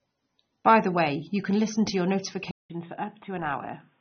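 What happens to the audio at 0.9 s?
The speech sounds dull and smeared, with nothing above 6.3 kHz, as it does throughout the clip. The likely cause is AAC compression, which fits a low bitrate near 27 kbps.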